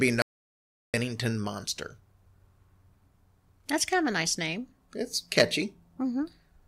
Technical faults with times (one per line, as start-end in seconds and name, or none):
0.22-0.94 audio dropout to silence